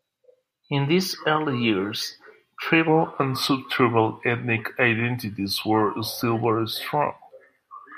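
From 2.88 s to the end, there is a section at the wrong speed, 0.893x. The speech turns slower and about two semitones deeper. A mismatched clock is the likely cause.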